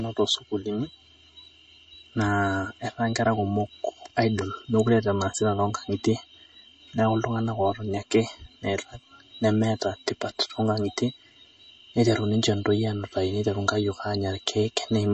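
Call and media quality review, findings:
Channel delay (comb filtering), throughout: hollow, phasey speech; one channel late by roughly 3 ms, mono sum cancels at evenly spaced notches from about 150 Hz upward.

MP3 compression, throughout: watery, swirly speech, smeared attacks, nothing above 8.3 kHz; likely a low-bitrate encode, consistent with 32 kbps.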